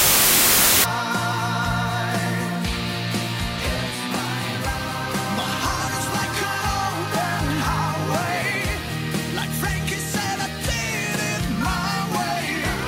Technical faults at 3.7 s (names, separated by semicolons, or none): none